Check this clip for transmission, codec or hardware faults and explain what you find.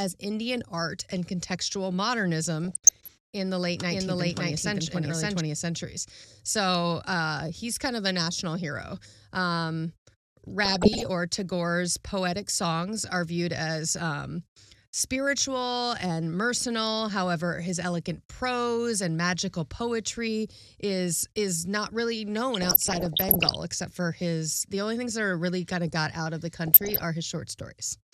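Two kinds of fault are audible in this speech clip: DAB burbling in four places and one stretch of doubled audio.

DAB burbling occurs at 2.64–3.16 s (just before "in the late"), 10.65–11.06 s, 22.54–23.55 s, and 26.67–27.03 s (right after "got out of the"). Weak reception let bit errors through into the MP2 data, so wrong samples put short blips of noise into single sub-bands, and wrong scale factors make individual sub-bands leap in level for up to a frame. On a spectrogram this appears as scattered bright rectangular blocks in narrow bands.

A doubled audio track runs from 3.91 to 5.41 s, starting after "in the late". A full-band copy of equal loudness trails by about half a second, likely from a second, slower capture path mixed back in. It has no reverberant tail, and it starts and stops abruptly. On the waveform, repeated envelopes are offset by roughly 0.5 s.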